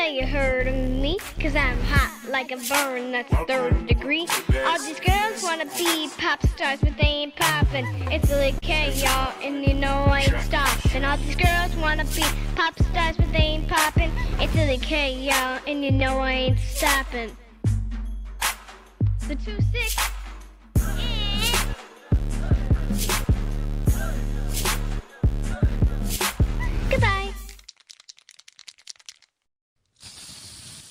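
From 7.58 to 8.65 s there's a repeated stall, basically stutter. Packets showed up late, so the jitter buffer kept running dry six times, and the receiver stretched the last sound to cover about 83 ms in total, the longest hold 42 ms. Nothing's lost, but it drags.

Then from 9.46 to 10.13 s you get scattered short gaps: a handful of tiny holes, each roughly 15 ms at most and about 40 ms altogether, patched by continuing the previous sound. It comes across as brief ticks and little hiccups.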